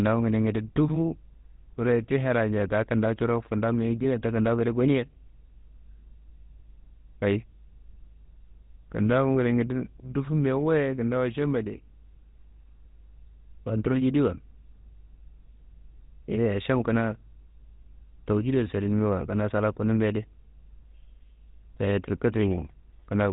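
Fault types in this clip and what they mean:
GSM full-rate codec: Throughout, the speech has a plainly audible buzzy, gravelly roughness, with nothing above 3.8 kHz. The coder models the vocal tract as a filter excited by sparse, regularly spaced pulses, which fits a 13 kbps GSM full-rate stream.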